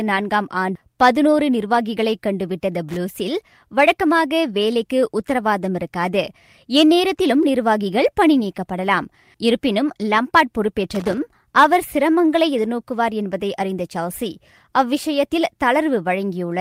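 At 0.75 to 0.77 s the speech jumps abruptly forward with no gap. This is a skip ahead: roughly 0.7 s of audio was dropped and the two sides were spliced almost directly. From 1.33 to 1.74 s the speech sounds hurried but keeps its pitch. This is a jitter buffer speed-up: playback runs at about 110% as the receiver trims short pitch-period pieces, around 50 ms in all, to shed excess delay. At 2.89 to 2.97 s and again at 10.95 to 11.18 s, irregular bursts of scratchy crackle appear. This is loose connector crackle, where a worn or dirty contact rapidly makes and breaks, chopping the signal.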